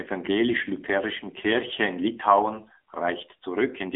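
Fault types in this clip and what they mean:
AMR narrowband mobile codec: the speech passes a 250 Hz to 3.5 kHz band with nothing above 3.8 kHz, and its buzzy, synthetic texture fits a low 7.4 kbps rate.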